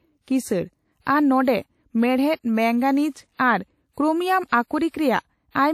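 A speech clip with plainly audible codec damage throughout: ringing, washy smearing and breathing hiss, likely WMA compression, which fits a low bitrate of around 48 kbps.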